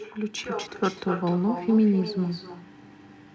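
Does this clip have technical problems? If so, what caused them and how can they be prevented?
Yes. Echo with no canceller runs through the whole clip of speech: every phrase returns about 13 dB quieter and thinner, roughly a third of a second later. Unlike room reverberation, it is a distinct delayed copy rather than a smooth decay, which points to the far end's loudspeaker feeding its microphone unprocessed. Enabling acoustic echo cancellation at the far end, or having that listener use a headset, prevents it.

A skip ahead occurs between 0.44 and 0.46 s. Playback jumps forward by roughly 0.7 s with no gap or fill, so a stretch of speech vanishes and the two sides are joined almost directly. A dropout would leave silence or concealment noise instead, so this suggests the jitter buffer discarded queued audio that had backed up. Gentler buffer limits and a steadier network connection prevent it.

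A jitter buffer speed-up runs from 0.67 to 2.01 s. The speech plays about 6% fast at unchanged pitch, sounding slightly hurried, as short pitch-period pieces totalling about 70 ms are cut out to shrink excess buffered delay. A resampling error would shift the pitch as well. Reducing packet bunching on the network path keeps the buffer from overfilling.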